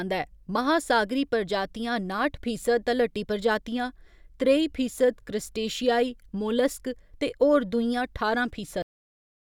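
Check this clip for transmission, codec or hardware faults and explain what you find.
One fault: a cut-off end at 8.82 s. The final buffers of speech were never written out, so after "होर दूइयां ठारां" the sound stops mid-utterance and drops straight to digital silence, with no natural decay, until 9.55 s.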